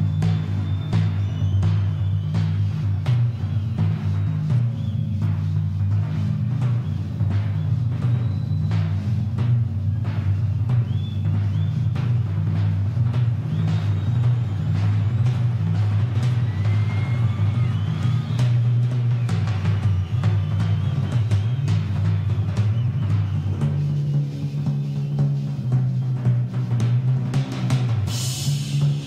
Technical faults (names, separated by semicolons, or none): none